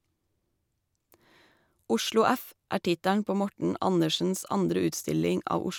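No audible faults are present anywhere in the recording.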